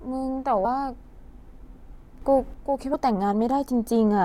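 At 0.64 s, compressed frames are skipped. About 70 ms of speech goes missing, which points to a few lost frames. The decoder jumps ahead.

From 2.22 to 2.54 s, the level rises by about 6 dB at once. Speech and background noise jump together. This is likely a sudden gain jump, a digital gain change applied without a ramp.

At 2.93 s, compressed frames are skipped again. About 150 ms vanishes, roughly ten frames' worth. The audio leaps forward.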